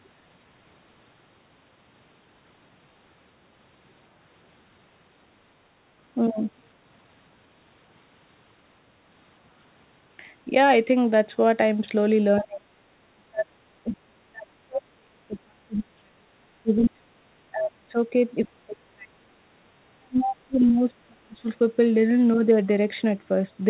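Speech, band-limited with nothing above 4 kHz, which fits a narrowband call path such as G.711. The main fault is speech suppressed in double talk at 10.45–10.52 s (a shallow dip of a few dB), 12.39–12.66 s, 13.15–13.96 s, 14.27–16.27 s, 16.63–19.2 s and 19.94–21.47 s, with the later stretches cut by around 30 to 40 dB. An echo canceller likely mistook simultaneous talk for its own echo and attenuated everything. On a waveform the envelope collapses in these spans; on a spectrogram the harmonic bands fade or break into fragments. The other side's voice is leaking through at 12.36–12.42 s and 20.61–20.78 s, faint and roughly 20 to 25 dB below the talker, likely residual loudspeaker echo the canceller failed to remove. On a spectrogram it appears as brief, weak traces overlapping the suppressed regions.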